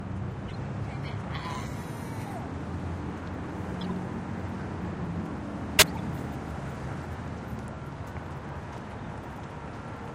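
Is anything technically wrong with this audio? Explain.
Yes. Corrupt frame decoded at 0.48 to 0.55 s, 3.81 to 3.92 s and 5.79 to 5.98 s in these everyday sounds. Damaged compressed frames were decoded anyway, putting energy at wrong frequencies. The result is chirpy noise bursts, faint near -30 dBFS at first and much louder, about -10 dBFS, at the third.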